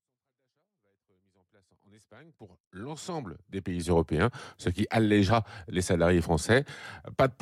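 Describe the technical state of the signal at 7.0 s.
At 7.0 s the speech signal is intact, with no audible fault at that moment.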